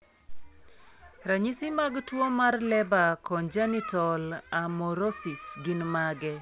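No audible technical faults here.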